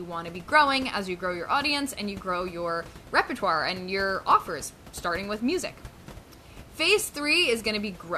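The speech signal is intact throughout, with no technical fault in the recording chain, and the only thing beneath it is the room's own background noise sitting about 20 dB below the voice.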